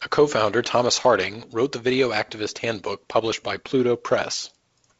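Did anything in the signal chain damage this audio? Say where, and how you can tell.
No, nothing damaged this audio.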